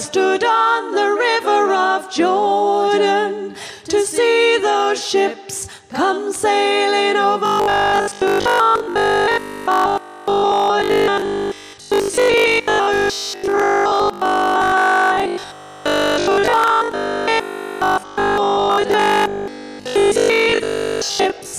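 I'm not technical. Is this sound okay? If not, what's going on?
No. From about 7.46 s until 21.58 s, the sound has robotic sound from repeated short buffers. The likely cause is that new audio wasn't reaching the playback fast enough, so the software kept replaying the last tiny slice, about 20 ms long, to fill the gaps, for roughly 70% of that stretch. Those rapid repeats stamp a fixed 50 Hz buzz onto everything, making the sound rigid and metallic while it loosely keeps its shape.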